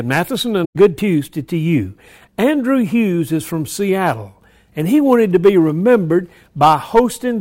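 From 0.64 to 0.76 s, AAC frame loss with muting opens a soft-edged gap. Lost frames were zeroed, so the speech fades out and back in.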